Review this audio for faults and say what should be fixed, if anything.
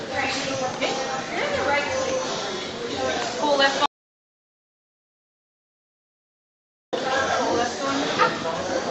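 At 3.86 s the sound cuts off abruptly and drops to dead digital silence, with no room tone or noise floor underneath, until it returns mid-flow at 6.93 s. That is an audio dropout to silence lasting about 3.07 s, and whatever happened in that span is gone. The likely cause is a momentary loss of the input signal while the recorder kept writing silence. Securing cables and links, and monitoring the input live, would prevent it.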